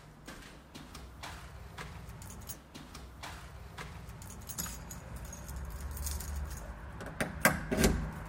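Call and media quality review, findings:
Stream segment repeated at 2.53–4.53 s: a 2 s stretch of audio plays again, with a brief blip at the jump back. Probable component is the player or segment queue, which fetched or enqueued the same chunk twice. Waveform and spectrogram show two identical 2 s blocks back to back, with a sharp discontinuity at the seam.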